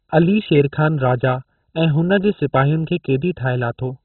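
Throughout the speech, the cause is likely MP2 compression at a very low bitrate, which starves the upper sub-bands of bits until they switch off. Nothing survives above about 4.1 kHz, leaving the speech dull, with a heavy gurgling, granular distortion in the remaining bands.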